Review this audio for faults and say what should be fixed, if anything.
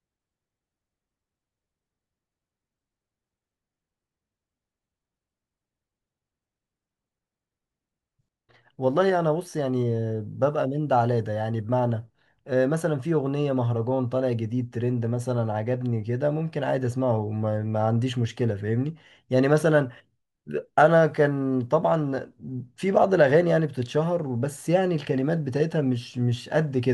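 No faults; nothing to fix.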